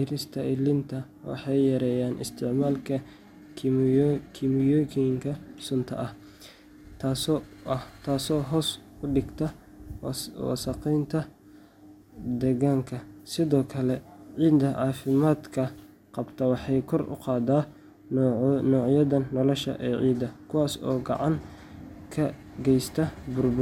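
No technical faults are audible anywhere in the speech.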